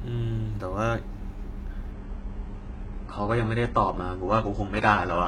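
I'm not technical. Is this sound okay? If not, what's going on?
No. An adaptive stream at a lower bitrate takes over from 1.92 s to the end. The connection slowed, so playback switched to a much smaller version of the speech. The sound instantly turns duller, losing its crisp top end, with no gap.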